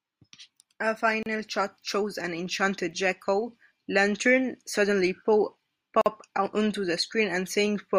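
Silences of 32 and 46 ms break the speech at 1.23 s, before "shot shows an enchanted", and at 6.01 s, before "onto the". These are gaps at joins of encoded pieces, left by untrimmed encoder delay and padding.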